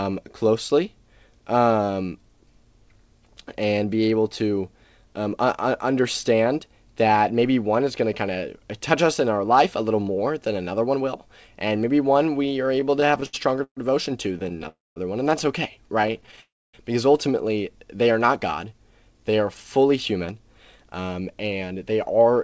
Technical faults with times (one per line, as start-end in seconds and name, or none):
12.76-13.79 repeated stalls (stutter)
14.29-14.66 repeated stalls (stutter)
14.68-14.98 call audio freeze
16.02-16.39 repeated stalls (stutter)
16.41-16.75 call audio freeze
17.86-19.37 jitter buffer slow-down
20.79-22.34 jitter buffer speed-up